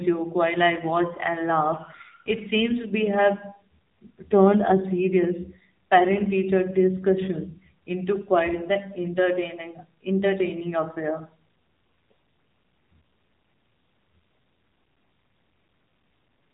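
The speech passes through an AMR narrowband mobile codec throughout, leaving nothing above 3.8 kHz and a plainly buzzy, synthetic quality that fits the 7.4 kbps AMR-NB mode.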